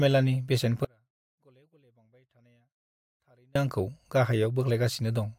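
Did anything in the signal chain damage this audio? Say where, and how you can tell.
Yes. An audio dropout to a faint residue runs from 0.85 s to 3.55 s, so about 2.7 s of speech is lost. The cut and the return are both abrupt, and the gap is not silent but holds faint sound about 40 dB below the signal. A natural pause or a fade would not keep that leak. The cause is likely an interrupted feed or connection upstream, with the input after the break still live.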